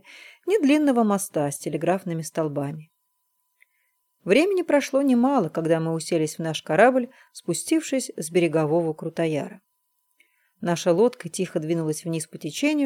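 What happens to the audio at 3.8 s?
Nothing goes wrong at 3.8 s; the audio continues intact through that moment with no dropout, click or distortion.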